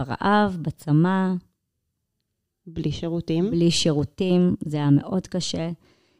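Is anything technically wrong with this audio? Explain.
No, no technical faults.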